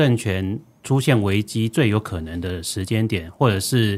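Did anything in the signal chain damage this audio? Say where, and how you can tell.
No, nothing in the chain audibly damaged this recording.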